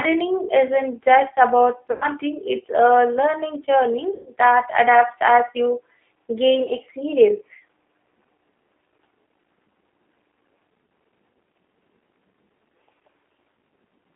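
The whole thing runs through a G.729 codec, squeezed into a 300 to 3400 Hz phone band at 8 kbit/s. The codec damage is plainly audible: the speech is rebuilt from a vocal-tract model and sparse pulses, so it comes across rough, a bit synthetic, with nothing bright up top.

Then there's VoIP packet loss concealed by the speech codec. At 1.92–2.04 s, right after "isn't just about" and before "it's a learning", about 90 ms goes missing. At 4.14–4.30 s, just before "that adapts as you", it's about 120 ms. Shorter ones follow at 7.54–7.61 s (about 60 ms) and 10.86–10.89 s (about 30 ms). Each time, the decoder stretches the last pitch and filter into a buzzy tone or coloured noise that fades. The lengths fit dropouts of one to four 30 ms packets.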